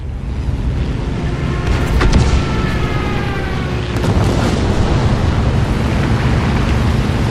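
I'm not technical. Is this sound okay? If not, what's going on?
Yes, this sound is okay, and nothing is going wrong in it.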